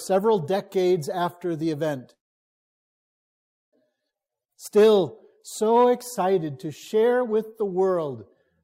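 A call audio freeze hits at 2.13 s: the last bit of sound trails off and the line goes essentially silent until 3.75 s, then the audio picks up right where it stopped, now running about 1.6 s late, with nothing actually lost. That's likely packets stalling in transit and the jitter buffer running dry.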